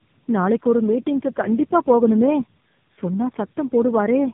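Tandem speech coding throughout: re-encoded through what sounds like four narrowband codecs, each compounding the last, the speech turns rough, warbly and muffled, with nothing above 3.6 kHz.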